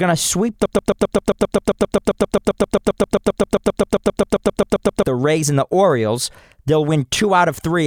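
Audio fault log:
0.66–5.05 s, broken-record loop: just after "to sweep", a 132 ms fragment of speech repeats exactly, back to back, 33 times for about 4.4 seconds, and the speech that belonged in that span is lost. The likely cause is a stalled player, encoder or stream that kept resending the last piece it held. Unlike a stutter or jitter glitch, every repeat is identical and seamless, with no gaps, drift or recovery until the loop breaks.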